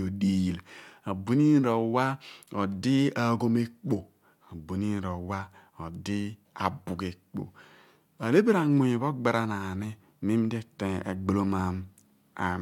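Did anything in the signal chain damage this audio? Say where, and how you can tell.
No, nothing in the chain from capture to playback left an audible mark on this speech recording.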